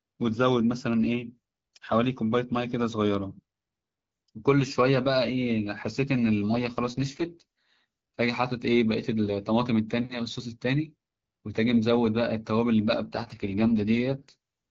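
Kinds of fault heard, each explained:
AMR rate drop: Twice, from 6.52 to 7.85 s and from 13.03 to 14.36 s, the speech turns coarse, buzzy and more synthetic for just over a second, then recovers. The roughness fits the AMR wideband codec being pushed from 12.65 down to its 6.6 kbit/s mode, spending the freed bits on error protection. Unlike a dropout or a bandwidth collapse, there is no gap and the bandwidth stays the same. Only the texture degrades.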